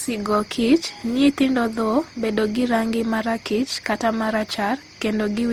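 Throughout the speech the sound is swirly and hollow, with smeared consonant attacks and content reaching up to about 20.2 kHz. This is generation loss, likely from about seven successive lossy encodes, which fits a 48 kbit/s Opus chain, each pass stacking fresh quantisation noise.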